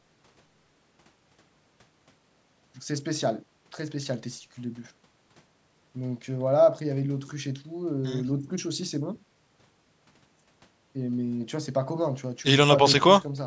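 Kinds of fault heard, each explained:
No faults can be heard in this speech.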